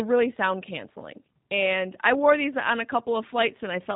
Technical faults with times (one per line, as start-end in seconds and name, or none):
0.00-3.96 G.729 codec